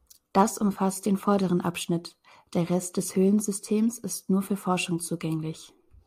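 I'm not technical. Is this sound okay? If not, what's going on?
Yes, the recording has no technical faults that a listener can hear.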